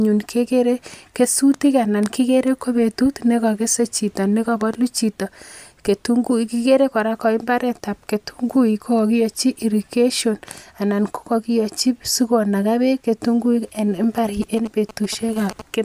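From 14.42 to 15.62 s, GSM signalling bursts break through: a galloping dit-dit-dit of short 217 Hz buzzes, roughly 15 dB under the speech. A nearby 2G phone's radio bursts are being rectified by the audio circuit. The grouped, intermittent rhythm separates it from steady mains hum or an active call's continuous buzz.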